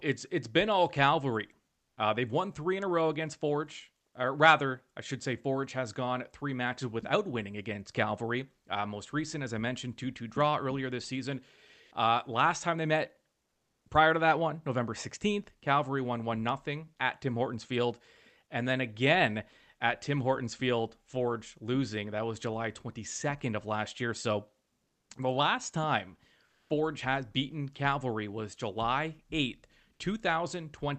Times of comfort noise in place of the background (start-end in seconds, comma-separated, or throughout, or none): 1.83-1.97, 11.83-11.91, 13.45-13.89, 24.83-25.09, 26.45-26.69